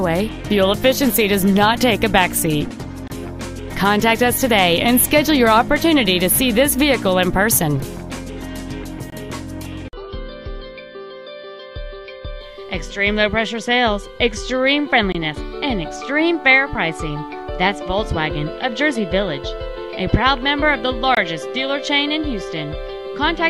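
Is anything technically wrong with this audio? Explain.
Yes. A gap between chunks occurs at 3.08, 9.10, 15.12 and 21.15 s. The audio arrives in 6-second chunks with 23 ms of silence left at each join. Nothing is lost, but the sound drops out in short holes at a steady interval.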